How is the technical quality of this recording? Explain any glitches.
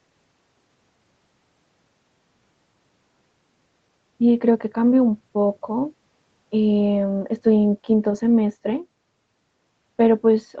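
No glitches can be heard anywhere in the recording. The speech shows the signs of a call's microphone processing, with the lowest bass filtered out and nothing above 8 kHz, which is expected for that path.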